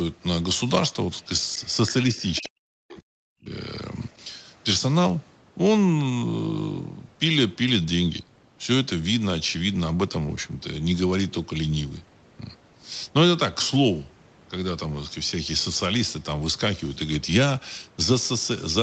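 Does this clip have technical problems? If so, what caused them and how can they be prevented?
Yes, two related problems, both right around the start.

From 2.19 to 2.49 s there's a short burst of the other side's voice leaking through, sitting roughly 20 dB under the main speech, so it comes across as a faint scrap. The likely cause is the far end playing on a loudspeaker and the echo canceller not fully removing that sound from the mic before sending it back. Using a headset, or lowering the speaker volume and keeping the mic away from it, would prevent this.

Overlapping that, from 2.4 to 3.53 s, the speech is suppressed in double talk. The main voice dips for about a second in total, at its worst dropping by something like 40 dB. This likely happened because both sides were talking at once and the echo canceller couldn't tell the near talker from the loudspeaker echo, so it turned everything down together. 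A headset or an echo canceller with better double-talk handling would keep the talker's voice intact.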